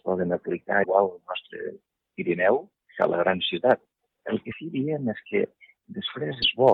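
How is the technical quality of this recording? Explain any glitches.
The recording has three short glitches, at 0.82–0.85 s, 4.51–4.54 s and 6.42–6.44 s, each about 30 ms. They are likely a broken MP3 bit reservoir: after frames were lost, the next 26.1 ms frame fetched its borrowed data from the wrong frame. The sound skips forward and a brief chirp, noise burst or short hole fills the gap. That forward jump plus garbled burst separates it from a plain dropout, which leaves only silence.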